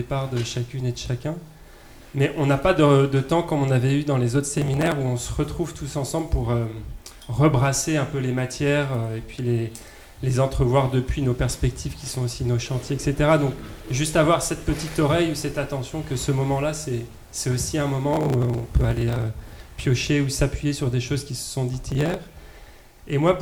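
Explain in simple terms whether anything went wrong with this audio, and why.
Three bursts of processor overload crackle occur, at 4.58 to 4.92 s, 18.13 to 19.86 s (the longest), and 21.92 to 22.29 s. The computer couldn't keep up, so dozens, and in the middle burst over a hundred, tiny slices of audio were skipped. Each slice lasted under a millisecond. Unlike a single dropout, which is one clean gap, this is a rapid string of sharp cuts heard as gritty tearing, and it stops as soon as the load eases.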